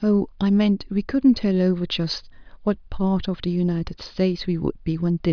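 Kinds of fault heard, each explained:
Nothing here needs flagging, since the speech runs along without a single technical fault to point at.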